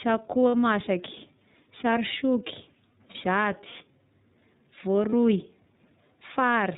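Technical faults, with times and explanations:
Throughout: iLBC codec. The sound is band-limited with nothing above 4 kHz, and the damage is plainly audible as a slightly rough, synthetic texture. iLBC codes the excitation of each frame on its own rather than predicting from the previous one, which costs detail. The framing fits the 13.33 kbps mode with 30 ms frames. Fine spectral and harmonic detail is approximated, so the speech stays clear but sounds mechanical.
0.48–0.54 s, 3.11–3.16 s, 5.10–5.13 s: lost iLBC frames. Three short dropouts are concealed by the decoder, lasting 60 ms at 0.48 s and 30 ms at the other two times. The first gap fits two consecutive lost 30 ms frames, the others one each. The decoder fills each gap by repeating the last pitch cycle blended with noise, so it sounds like a brief held, buzzy or breathy vowel. Because each iLBC frame decodes independently, normal sound returns almost immediately afterwards.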